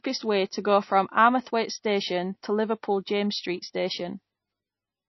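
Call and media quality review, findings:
Speech, whole clip: watery, swirly texture, treble gone above about 5.8 kHz. Likely MP3 compression at a low bitrate, around 24 kbps, dropping weak frequency lines frame to frame.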